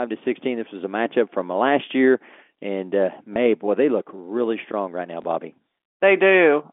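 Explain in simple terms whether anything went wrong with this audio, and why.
Packet loss with the last packet repeated happens twice: at 3.34 to 3.36 s, between "last year and uh" and "boy they look really", and at 5.22 to 5.24 s, right after "really strong right now". Each time, a small chunk of audio, about 20 ms, never arrived. The receiver filled the gap by replaying the previous chunk, which doesn't join smoothly with what comes next. The result is a small blip. The narrow telephone sound is just how a phone line carries audio.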